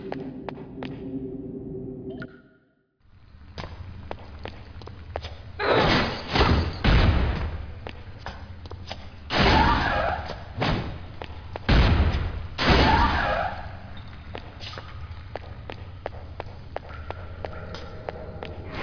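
No technical faults can be heard anywhere in this audio. There is no moment where the signal chain audibly goes wrong.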